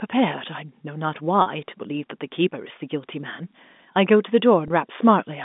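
Speech over a narrow telephone-style line, with two brief gaps bridged by packet loss with pitch repetition. At 1.42 to 1.46 s, about 40 ms, and at 4.68 to 4.70 s, about 20 ms, the receiver loops the last pitch period to fill the missing stretch, which fits two lost packets and then one. Unlike a plain dropout or click, these gaps never go silent. They sound like a momentarily held, buzzy tone that blends back into the speech.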